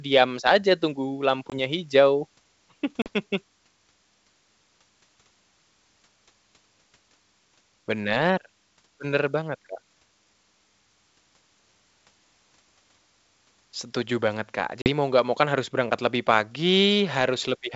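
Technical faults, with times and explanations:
1.50–1.59 s, 3.02–3.08 s and 14.82–14.89 s, packet loss on an ADPCM call: hard-edged silent holes of about 20, 40 and 40 ms, after "saja tunggu" and before "mau nggak mau kan", fitting one or two lost packets. Unlike a simple dropout, the audio resumes slightly distorted for some tens of milliseconds, because the decoder's predictor and step size no longer match the sender's.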